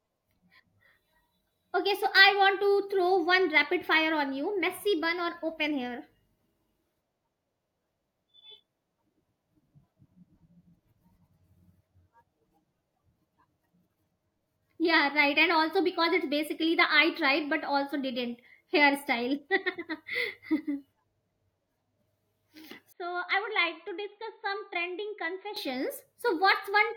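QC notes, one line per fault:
22.92–25.56 s, input switched to a poorer device: the speech abruptly turns dull and boxy, with nothing above 4.4 kHz, and drops by about 10 dB. A faint new background noise sits well below the speech. There is no gap at the switch, and the full-band sound returns at 25.56 s. The likely cause is the recording input moving to a narrower-band microphone or headset call profile, which brings its own band limit, level and noise for that stretch.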